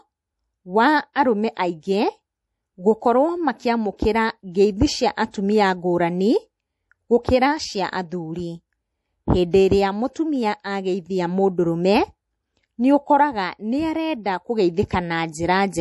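A speech clip with a hard ceiling at 11.5 kHz, above which nothing remains, and a watery, swirling quality on sibilants as weak high-frequency detail flickers in and out from moment to moment. That pattern points to heavy MP3 compression as the likely cause, at a bitrate low enough to fit roughly 48 kbps. Unlike a simple low-pass filter, which would only dull the top end, this damage also churns and chirps inside the band that remains. Two pre-echoes are audible, from 5.31 to 5.34 s (about 31 ms) and from 14.89 to 14.91 s (about 20 ms). In each, a short hiss rises just before a sharp onset, and the attack itself sounds softened. This happens because the codec spreads its quantisation noise across the whole transform block, so noise sized for the loud attack spills into the quiet instant before it. What separates this from an ordinary click or a noise burst is that the hiss always leads the transient and is tied to it, rather than landing at random.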